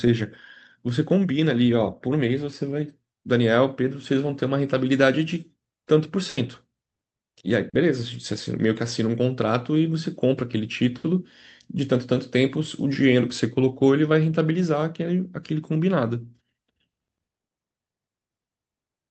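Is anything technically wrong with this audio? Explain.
Yes, there are two packet-loss faults. From 6.29 to 6.39 s there is a burst of packet loss. About 80 ms never arrived. The receiver stretched the last sound into a fading buzz or hiss, then jumped ahead. From 7.69 to 7.75 s there is a short concealed packet loss. About 40 ms went missing. The receiver filled the gap by extrapolation, leaving a brief smear or wobble.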